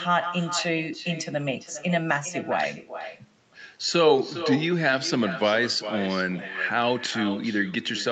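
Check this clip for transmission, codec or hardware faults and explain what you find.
One fault runs through the whole speech clip: echo with no canceller. The far end is playing the call through a loudspeaker, and its microphone sends it straight back without removal. Every phrase returns roughly 0.4 seconds later as a thinner copy, about 11 dB below the speech. The top end stops near 8 kHz, consistent with the call codec's bandwidth, which is expected for this kind of link.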